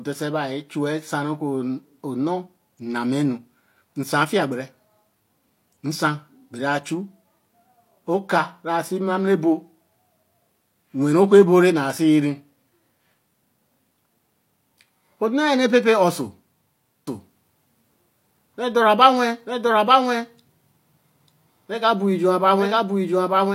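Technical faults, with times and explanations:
17.07 s to end: doubled audio track. A second full-band copy of the speech enters abruptly, trailing about one second behind at roughly equal level, with no decay or room colour. The likely cause is the audio being captured again through a slower path.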